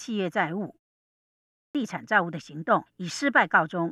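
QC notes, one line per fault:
1.10–1.75 s clipped start after a pause: the output wakes late after 0.39 s of silence, swallowing 0.65 s. The waveform starts abruptly, with no onset energy.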